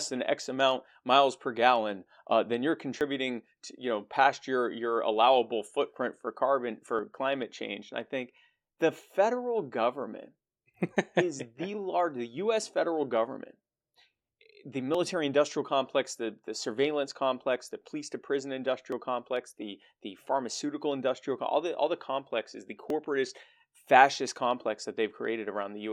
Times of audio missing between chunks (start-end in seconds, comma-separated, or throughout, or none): 3.01, 6.99, 10.97, 14.94, 18.92, 22.90